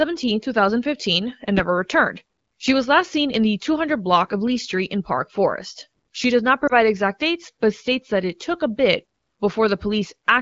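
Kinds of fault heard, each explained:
Lost AMR speech frames: a brief dip or warble in the speech between about 6.67 and 6.78 s, consistent with one dropped 20 ms frame; the AMR-WB decoder bridged the gap by reusing the last good pitch and vocal tract settings at lowered gain.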